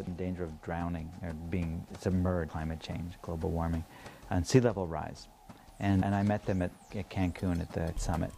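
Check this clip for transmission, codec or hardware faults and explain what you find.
Damaged data in a compressed stream at 0.07, 2.49, 6.02 and 7.97 s: corrupted bytes make the decoder misread frames and resynchronise, heard as brief chirps or blips.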